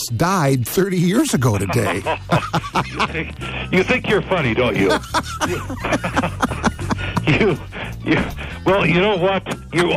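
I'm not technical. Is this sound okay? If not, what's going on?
No, there's a train of clicks from about 2.02 to 4.78 s: roughly thirty sharp ticks, around nine or ten a second at an uneven pace, about as loud as the sound itself. The likely cause is electrical interference or a faulty connection or power supply.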